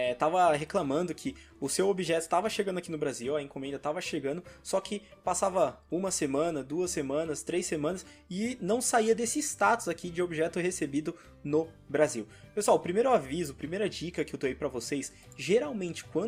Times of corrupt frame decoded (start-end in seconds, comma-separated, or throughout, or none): none